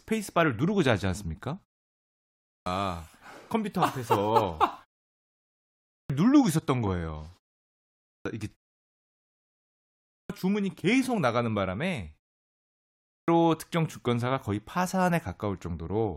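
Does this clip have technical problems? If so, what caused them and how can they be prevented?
Yes. Speech restarts abruptly out of silence with its first sounds missing at 2.02, 5.45, 7.61, 8.85, 9.64 and 12.7 s. This is a clipped start after a pause: the output device sleeps during gaps of only 0.3 to 0.7 s and takes roughly 0.6 s to wake, so the onset is swallowed. Keeping the output path continuously active, for example by disabling the device's power saving or idle sleep, prevents it.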